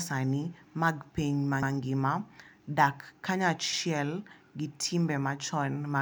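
Overlapping chunks occur at 1.63 to 1.73 s, just after "mag piny", and again at 3.73 to 3.83 s. The speech was handled in 2.0 s blocks, and each new block began 100 ms before the previous one had finished, so that 100 ms slice plays twice at every join. It sounds like a brief stutter, as if the speech hiccups and repeats a fragment, recurring about every two seconds.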